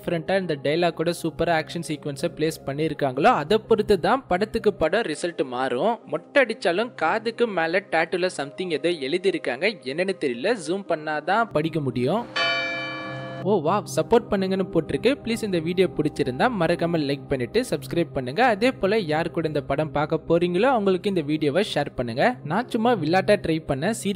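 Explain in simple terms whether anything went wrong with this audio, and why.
From 4.83 to 11.51 s the sound turns dull and loses its crisp top, likely an input switched to a poorer device, then clears again.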